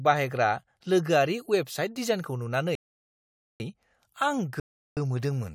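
The player's buffer ran dry twice, so playback halted until more data arrived: a rebuffering stall from 2.75 to 3.60 s, adding 0.85 s, and another from 4.60 to 4.97 s, adding 0.37 s. Each time the speech drops to silence, then picks up exactly where it stopped, with nothing missing.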